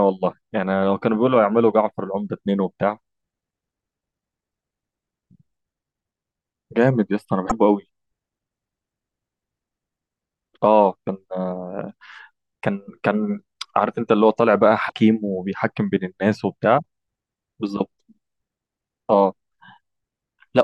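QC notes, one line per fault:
7.49–7.52 s and 14.88–14.92 s, broken MP3 bit reservoir: brief 30–40 ms disruptions where the audio skips forward, likely from dropped 26.1 ms frames whose successors read wrong reservoir bytes.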